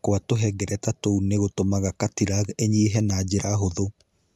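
Nothing technical stands out in this short bit of speech; there's no fault to point to anywhere in it.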